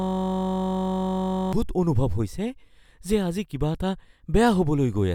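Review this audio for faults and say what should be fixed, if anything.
A system hang loop is already under way at the start and lasts until 1.53 s. A 21.33 ms slice, consistent with a 1024-sample buffer, repeats at 46.9 Hz, producing a steady buzz. Prevent it by having the driver mute or zero the ring buffer whenever the audio thread stalls.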